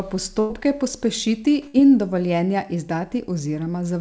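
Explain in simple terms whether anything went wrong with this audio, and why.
Yes, twice there is a burst of packet loss. From 0.40 to 0.51 s, just before "pospešiti in dovoljenja", and from 1.67 to 1.76 s, just before "in dovoljenja", chunks of the speech never arrived. The receiver covered each hole by stretching the last sound and letting it fade. Unlike a plain dropout to silence, you hear a brief held buzz or hiss, and then the speech jumps ahead because about 100 ms, then 60 ms, is gone.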